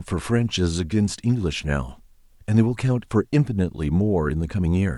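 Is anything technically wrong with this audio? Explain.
No, nothing technically wrong turns up anywhere in this speech recording.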